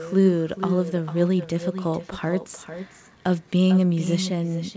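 From the start to the end of the speech, every phrase is followed by a second copy about 9 dB quieter, arriving about 0.4 s later. This is echo with no canceller. The far end's loudspeaker feeds the call back into its microphone, and nothing subtracts it before it returns across the network. It is thinner than the original, and, like the rest of the audio, stops at 8 kHz. The long, discrete delay separates it from room reverberation, which would smear continuously into each word.

At 1.43 s a sharp snap or tight cluster of clicks lasting about 3 ms sits on top of the speech without interrupting it. This is an electrical switching spike, likely a nearby switch, motor or static discharge arcing and coupling into the audio line. Because the underlying speech carries on intact across the snap, it differs from a dropout or packet-loss glitch, where sound would briefly vanish or be patched over.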